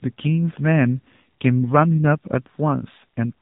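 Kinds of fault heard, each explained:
AMR narrowband mobile codec, throughout: nothing above 4 kHz survives; speech rebuilt from a vocal-tract model sounds buzzy and synthetic, pointing to a 7.4 kbps mode.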